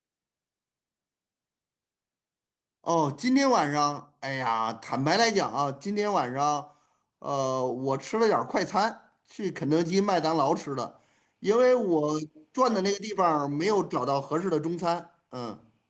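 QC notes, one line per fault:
The speech carries the ordinary signature of a call path, with nothing above 8 kHz, which fits an Opus-coded wideband call, and the lowest bass trimmed by the microphone high-pass, with no faults heard.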